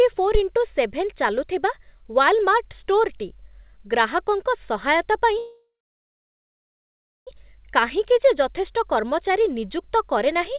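From 0.35 to 0.41 s, a supply switched on a live input sends a step through the coupling capacitors, heard as a phantom power thump, a deep knock fading within about 13 ms. From 5.38 to 7.29 s, a call audio freeze occurs, likely because delayed packets emptied the jitter buffer. The last sound is stretched into a fading buzz, then about 1.6 s of silence, before the speech resumes where it stopped, nearly 1.9 s late, with nothing lost. Throughout, the audio stops at 4 kHz, which fits G.711 call coding.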